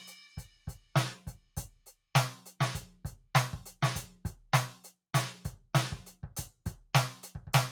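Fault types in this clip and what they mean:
Sound cut by the noise suppressor: The suppressor mistook part of the music for background noise and pulled it down. Between 0.28 and 0.91 s the level dips by about 10 dB. Roughly 0.4 s of that stretch sounds sunken.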